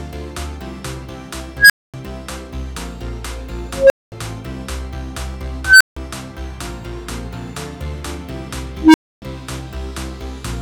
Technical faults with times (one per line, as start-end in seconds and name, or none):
1.58-1.94 unstable filter
3.71-4.12 unstable filter
5.65-5.97 unstable filter
8.80-9.22 unstable filter